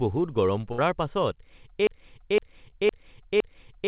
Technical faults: burst of packet loss; broken-record loop; short concealed packet loss

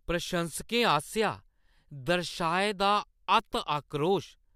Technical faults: none

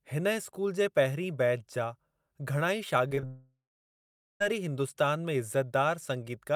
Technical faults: short concealed packet loss; long network dropout

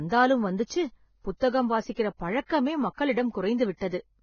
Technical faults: Vorbis compression; pre-echo

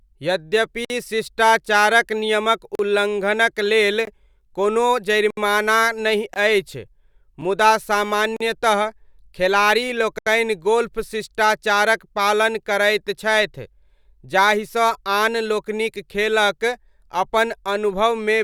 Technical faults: block of digital silence

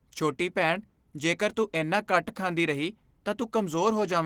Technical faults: Opus voice compression

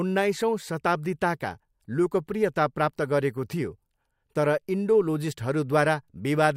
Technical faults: none

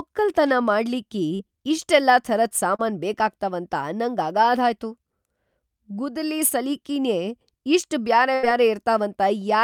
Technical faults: short concealed packet loss; burst of packet loss

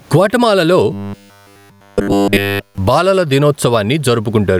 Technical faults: gain pumping; robotic sound from repeated short buffers

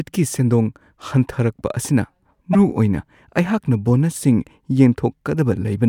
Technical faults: broken MP3 bit reservoir

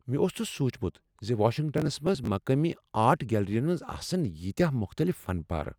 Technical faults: processor overload crackle

